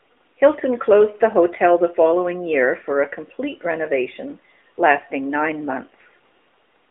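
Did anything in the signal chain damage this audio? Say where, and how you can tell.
No, nothing along the chain damaged this speech; it comes through a narrowband mobile call path with the usual telephone band of roughly 300 Hz to 3.5 kHz, and that's just how the line sounds.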